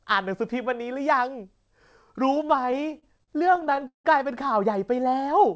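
From 2.50 to 4.07 s the speech drags and stutters, catching over and over as if it keeps snagging. That is a run of repeated stalls (stutter): about 21 short hitches, the longest around 173 ms, together filling roughly 426 ms, over a quarter of that stretch. Packets were reaching the receiver late or too slowly, so its jitter buffer kept running dry. Each time it stretched the last sound and faded it on longer waits. Nothing is actually lost. The speech is only held up. The call path beneath it, which fits G.722 at 64 kbps, leaves nothing above 8 kHz.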